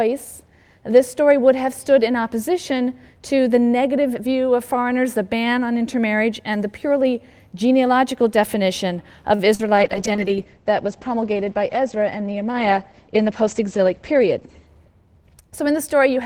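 At 9.35 to 9.42 s there is a short stall from a late packet. A packet missed its playout time and the jitter buffer ran dry, so the receiver held the last sound for 34 ms until the packet arrived. Nothing is lost, but the sound hangs slightly too long and the delay grows by 34 ms.

From 9.55 to 9.69 s comes a short concealed packet loss. About 40 ms of audio never reached the decoder, and the receiver filled the gap by extending the preceding sound for 41 ms before blending back. It comes across as a brief smear or wobble, adding roughly 10 ms to the playback.

At 9.77 s a call bitrate drop begins. The bandwidth estimate fell and the encoder went from 48 kbps to 10 kbps, and the coded bandwidth narrowed from 20 kHz to 8 kHz. Until 14.77 s the sound is coarse, watery and duller.

Within that stretch, from 13.22 to 13.54 s, there is a jitter buffer speed-up. The buffer held more audio than its target, so the receiver trimmed small pitch-period pieces, about 50 ms in total. 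Playback runs at 114% speed at the same pitch and sounds briefly hurried.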